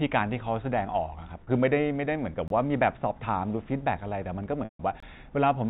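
At 1.44 s the speech briefly sticks on a slightly held, buzzy tone for about 30 ms, and at 4.64 s a longer version of the same thing starts: a buzz that fades to silence before the speech returns through a short cross-fade at about 4.80 s. Both are packet loss with pitch repetition. The receiver had nothing to play, so it looped the last pitch period. The first gap fits a single lost packet. The second lasted 150 ms, about five packets, so the repeated period faded out over roughly 50 ms.

At 2.48 s and again at 5.00 s the sound drops out abruptly for about 23 ms and then resumes with equally hard edges. These are gaps between chunks. The audio was delivered in 2.5 s blocks, and silence was inserted at each join, likely from codec padding or a player starting each block late. No material is lost, but the sound is cut at every boundary. Through all of this the G.711 A-law telephone coding keeps everything within a band below 4 kHz.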